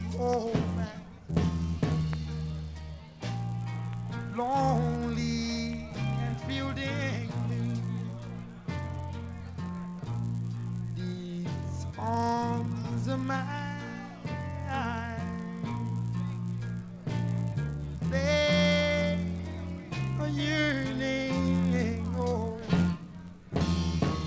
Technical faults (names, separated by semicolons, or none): resampler restarted on every block